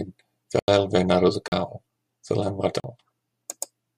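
The speech drops out abruptly to dead silence at 0.59 to 0.68 s (about 88 ms), 1.48 to 1.52 s and 2.80 to 2.84 s (40 ms each). Each is a block of digital silence: samples zeroed, most likely when the output buffer went unfilled in time.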